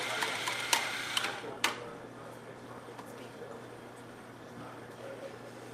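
No audible technical faults.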